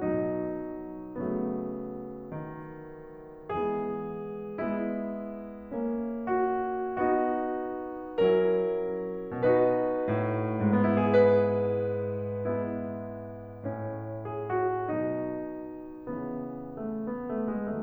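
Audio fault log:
No faults heard in the music at any point.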